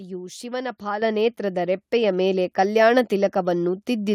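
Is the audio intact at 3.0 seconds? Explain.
Yes, the speech at 3.0 seconds plays through without any audible dropout, click, distortion or other fault.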